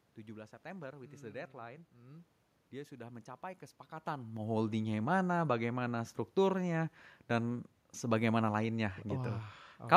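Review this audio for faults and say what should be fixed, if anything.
Nothing stood out on listening, so there is nothing here that needs fixing.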